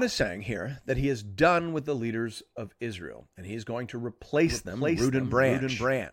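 At 4.47 s a second copy of the speech cuts in abruptly, trailing the original by about half a second at a few dB lower and running to the end, with no decay or room colour. This doubled audio track likely comes from a slower second capture path.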